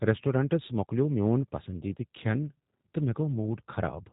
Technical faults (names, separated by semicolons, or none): G.729 codec